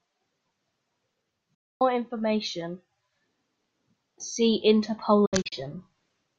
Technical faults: digital broadcast dropout

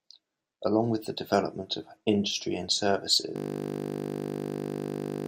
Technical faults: system hang loop

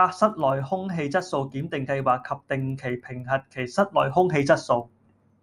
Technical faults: resampler restarted on every block

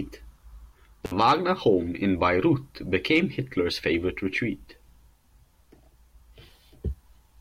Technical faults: intermittent contact

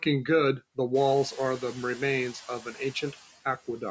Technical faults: speech cut by the noise suppressor

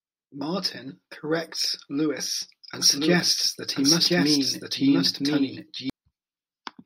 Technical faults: doubled audio track

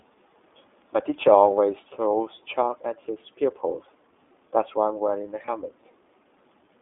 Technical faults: iLBC codec; lost iLBC frames

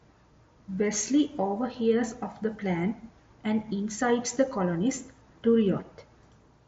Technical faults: none

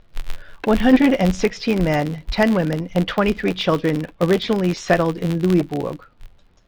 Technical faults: filter restarted on every block

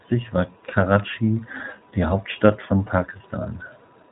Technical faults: iLBC codec

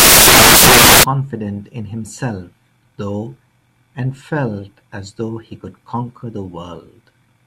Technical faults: samples built from the wrong bytes

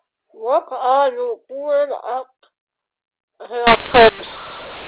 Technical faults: mu-law and A-law mixed up

